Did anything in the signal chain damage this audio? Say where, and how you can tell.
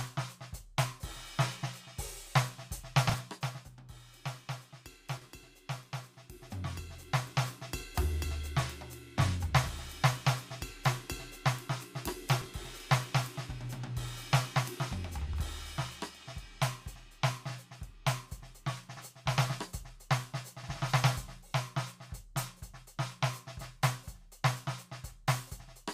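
Yes. Frames out of order, at the network or storage stage: the music garbles briefly at 3.09–3.14 s, 5.17–5.26 s, 12.41–12.46 s and 15.21–15.35 s. Adjacent blocks of 20, 40, 20 and 60 ms played swapped, which fits whole frames delivered out of sequence and decoded that way.

Zipper noise, at the gain stage in the driver or buffer path: from 6.04 to 7.52 s a ticking rides on the music while the level changes roughly 10 dB in unsmoothed steps of about 2 dB, around five per second, each step leaving a small click.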